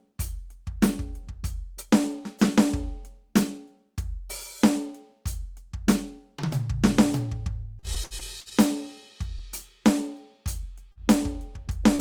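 Repeated packet loss (robotic sound) runs from 7.79 to 8.54 s. Over those three-quarters of a second the stream kept dropping out, leaving several holes, the longest about 69 ms. The decoder patched them by extending the last bit of music, so about a quarter of the stretch is synthetic fill (roughly 195 ms), plus some 40 ms that simply goes missing. The music turns choppy, with pieces missing.

Short concealed packet loss follows twice, at 10.92 to 10.99 s and again at 11.96 to 12.01 s, right at the end. Each time a few hundredths of a second failed to arrive. The receiver bridged the gap by continuing the preceding sound, about 39 ms and 30 ms of fill respectively, with some audio lost outright, before blending back. Each one comes across as a brief smear or wobble in the music.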